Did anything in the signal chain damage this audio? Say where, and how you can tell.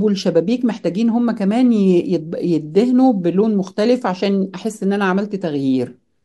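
Yes. From 0.13 s to 6.23 s, faint regular ticks recur about ten times a second through the speech, clearest on sustained sounds. These are clock slip clicks, likely from two unsynchronised converter clocks differing by roughly 200 ppm, dropping or repeating one sample per slip.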